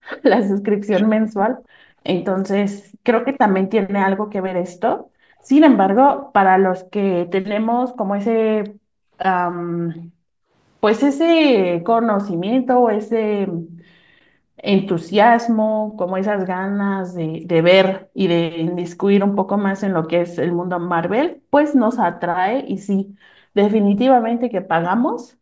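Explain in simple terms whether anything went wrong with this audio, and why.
Three kinds of echo-canceller trouble can be heard in this speech recording.

The first is background gated by the echo canceller. The call's echo canceller turned the microphone down hard while the far side's loudspeaker played. You hear the room sound dip to near silence, then come back. This happens from 0 to 3.04 s, from 4.96 to 10.53 s, from 12.76 to 18.18 s and from 20.53 s to the end. Each stretch holds about one to two seconds of these dips in total.

The second is an echo leak. A faint copy of the voice arrives about 0.35 s after the original. It appears from 0.08 to 0.23 s and from 5.42 to 6.22 s. This likely happened because a loudspeaker on one end fed its own sound back into the microphone. The echo canceller there did not remove all of it, so a scrap of it was sent back down the line.

The third is speech suppressed in double talk. 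The voice sinks sharply or drops out in pieces from 0.87 to 1.12 s and from 24.6 to 24.99 s. Each time lasts roughly a fifth to a third of a second. The likely reason is that both sides talked at once. The canceller could not tell the talker from the loudspeaker echo, so it turned both down.

Throughout, the sound stops at 8 kHz, which matches the call's microphone processing.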